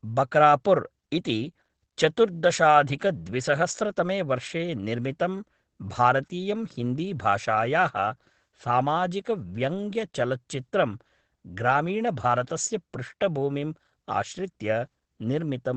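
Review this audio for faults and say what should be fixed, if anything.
Opus voice compression runs through the whole speech clip. Nothing comes through above about 9.1 kHz, and the SILK coder's rough excitation leaves plainly audible muffling, hoarseness and a slightly robotic edge, which fits roughly 12 kbps wideband. To prevent it, encode at a higher bitrate or keep the uncompressed source.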